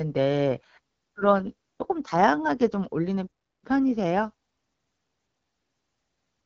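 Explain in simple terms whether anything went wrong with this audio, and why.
From 0.39 to 1.97 s and again from 5.49 to 6.45 s, the speech turns rougher and more synthetic. That's an AMR rate drop: the phone network switched the call to a lower-quality setting to protect it against a weak signal.

Between 3.27 and 3.64 s the sound cuts out for about a third of a second. That's a playback stall, most likely because the player briefly ran out of audio data.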